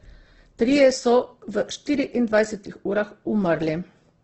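All the way through, this speech has nothing above about 8.2 kHz and sounds rough and grainy, with a noisy edge on the voiced parts. That's likely heavy Opus compression, filling starved bands with noise, which points to a low bitrate, around 12 kbps.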